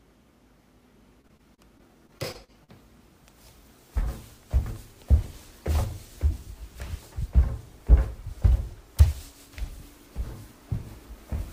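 From 1.21 to 2.70 s, repeated packet loss leaves ten short holes, the longest 38 ms, each patched with repeated sound, giving a choppy, robotic texture rather than one clean dropout.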